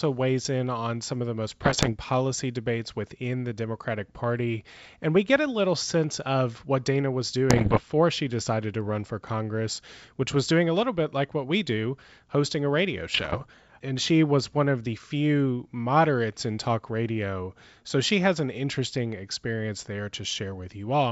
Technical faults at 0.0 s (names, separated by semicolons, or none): none